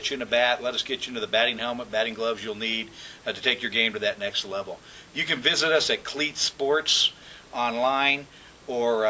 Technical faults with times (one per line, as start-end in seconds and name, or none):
none